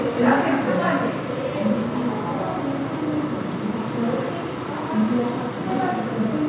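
No technical faults can be heard anywhere in the sound.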